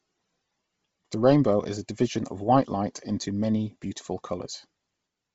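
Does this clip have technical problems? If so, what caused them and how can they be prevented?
Yes. Throughout, the speech sounds breathy and grainy with nothing above 7.7 kHz, likely Bluetooth LC3 compression at a low rate, consistent with roughly 24 kbps. Next time, record over a wired connection or a higher-bitrate link.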